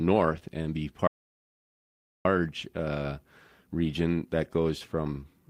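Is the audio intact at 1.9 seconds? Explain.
No. An audio dropout to silence runs from 1.07 to 2.25 s, so 1.9 s falls inside it. Just after "and be", the speech cuts off mid-flow and about 1.18 s of dead silence follows, with no room tone at all, before the speech resumes abruptly. The likely cause is that the input signal was lost while the recorder kept writing silence, so whatever was said during that stretch is gone.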